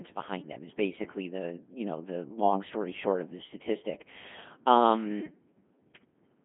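Throughout, the speech passes through a Codec 2 vocoder, likely at 2.4 kbit/s: voice rebuilt from sine waves, heavily robotic and buzzy, band-limited to 150 Hz–3.5 kHz, nothing above 3.8 kHz.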